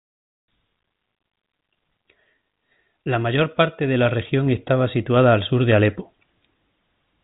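Nothing stood out on listening to this speech, which comes over the ordinary telephone channel with its usual narrow, 4 kHz-limited sound.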